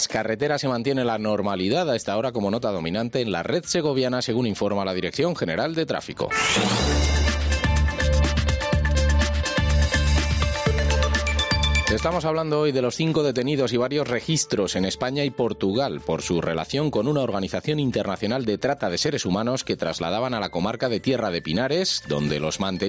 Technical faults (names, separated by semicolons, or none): gain pumping